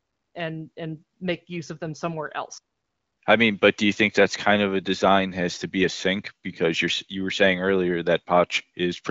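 Nothing in the recording stood out as a problem on listening.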